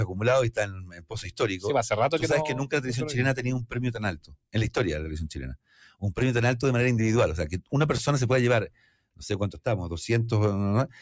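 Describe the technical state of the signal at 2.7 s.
At 2.7 s the sound is caught by a speech noise suppressor applied to music or sounds, which acts across the whole clip. It mistakes sustained tones and reverb tails for noise and pulls them down by roughly 10 dB, while attacks pass, so the sound pumps and thins. Unlike a compressor, the dips follow how steady the sound is, not how loud. Unlike dropouts, the level sinks gradually rather than vanishing. The call processing's limit at 8 kHz is normal.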